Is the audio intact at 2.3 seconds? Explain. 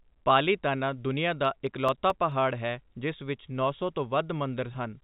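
No. At 2.3 s the clip is inside a run of CD scratch ticks from 1.45 to 2.53 s, after "ਪਾਲੀਤਾਨਾ ਦੁਨੀਆ". A disc blemish defeats error correction once per rotation, so the player conceals the damage, producing six brief ticks, the longest about 3 ms, about five per second.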